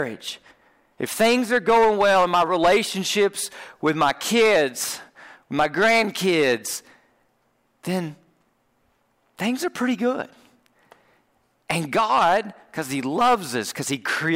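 A speech clip with hard clipping in six bursts: 1.0–2.8 s, 3.19–3.26 s, 3.9–4.6 s, 5.6–6.5 s, 11.7–12.4 s and 13.2 s to the end. Peaks are driven about 8–10 dB past the limit, so they're sliced flat and the loud stretches turn into a harsh fuzz. The short burst at 3.2 s is only about 3 dB over and comes across as a brief crackle.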